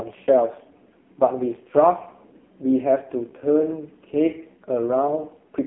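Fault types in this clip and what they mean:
AMR narrowband mobile codec: throughout, a low-rate mobile speech coder, fitting about 5.15 kbps, rebuilds the voice from a vocal-tract model, leaving it buzzy and synthetic, with nothing above 3.5 kHz.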